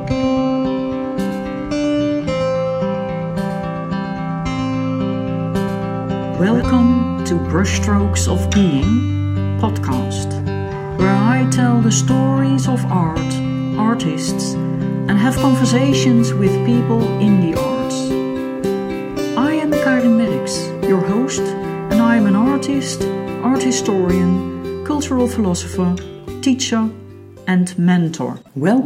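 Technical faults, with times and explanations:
0.00–6.62 s, doubled audio track: present from the start, a full-band copy trails by roughly 150 ms at around 5 dB lower, likely from a second, slower capture path. The waveform repeats each transient with no decay, the spectrogram shows a ghost of each onset, and the copy cuts off abruptly.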